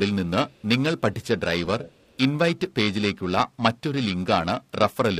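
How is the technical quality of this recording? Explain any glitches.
The recording is compromised by two faults: a constant roughness and brief returns of delayed speech.

Throughout the speech, a rough, metallic edge that disappears in pauses comes from periodic clock jitter: the converter clock wobbles around 1 kHz, adding sidebands beside every component.

From 0.48 to 0.67 s, 1.22 to 1.27 s, and 1.79 to 2.17 s, a faint copy of the speech trails 324 ms behind. It is very quiet in the first two spans and only about 20 dB down in the last. This echo leak likely comes from a loudspeaker echo canceller failing to remove some of the far-end sound its microphone picked up, which was then sent back.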